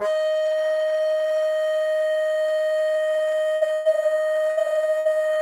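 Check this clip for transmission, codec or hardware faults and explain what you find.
The music has transmission faults: four bursts of packet loss late in the clip.

Burst of packet loss at 3.55–3.64 s, 3.73–3.88 s, 4.51–4.60 s and 4.99–5.08 s: about 60 ms of audio went missing each time (120 ms in the second). The receiver stretched the last sound and faded it, then the music jumps ahead, skipping the lost passage.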